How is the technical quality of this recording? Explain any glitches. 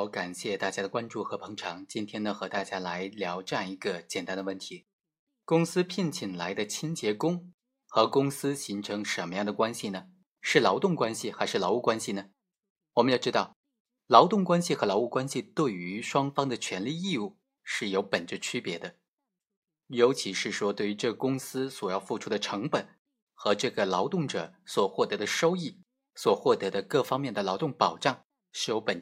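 No glitches turn up anywhere in this speech recording. Nothing in it breaks up, drops out or jumps.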